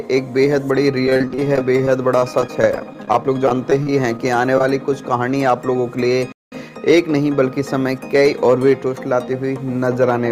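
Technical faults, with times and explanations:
1.05–4.64 s, repeated packet loss (robotic sound): for about three and a half seconds the stream keeps dropping chunks, some forty short holes with the longest around 34 ms. The receiver papers over each one by stretching the last bit of sound it had, which fills roughly 500 ms in total, about 14% of that stretch. Another 370 ms simply goes missing. Those repeated patches give it that choppy, robotic character, with bits clearly absent.
6.32–6.52 s, playback stall: the audio just stops dead for about 195 ms, then picks back up. That's a full fifth of a second of silence landing mid-flow, long enough that you notice it as a hiccup rather than a tiny gap. The likely cause is the player running dry of data or its playback thread getting held up, so nothing reached the output until it caught up again.
6.62–7.22 s, jitter buffer speed-up: right after the stall the sound runs about 7% fast for roughly 0.6 s, with the pitch unchanged. 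That's the receiver trimming its backlog. Audio piled up in the buffer, probably arriving in a bunch after the hold-up, so it snips out tiny pitch-period-sized slices, around 50 ms worth in all, to get the delay back down. It comes across as briefly hurried rather than higher.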